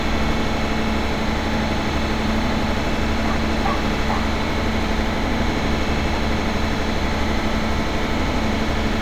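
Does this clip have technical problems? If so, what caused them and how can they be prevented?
No, nothing stood out as a technical problem on listening to this audio, so there is no cause to trace or anything to prevent.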